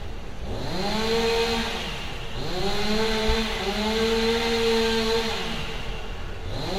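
Everyday sound, likely passed through transcoding between lossy codecs, fitting low-bitrate HE-AAC then MP3. Both codecs' artefacts are layered throughout, with nothing above 16 kHz.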